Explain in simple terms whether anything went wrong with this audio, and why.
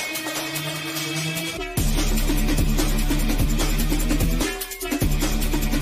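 Nothing went wrong here: the audio holds together steadily the whole way, with no dropouts, glitches or distortion to point to.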